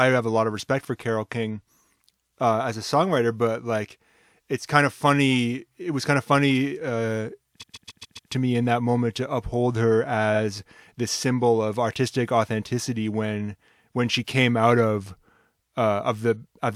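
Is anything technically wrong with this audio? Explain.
Yes. There are repeated frames at 7.60–8.29 s, where a 139 ms block plays five extra times, and at 10.34 s, where a 46 ms block plays once more. Compressed data was duplicated, so the speech stutters and runs longer.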